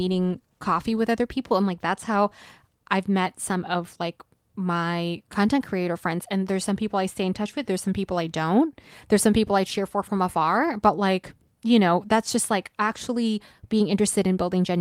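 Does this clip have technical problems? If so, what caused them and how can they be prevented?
No, nothing in this speech recording stood out as a technical problem on listening, so there is nothing here that needs tracing to a cause or preventing.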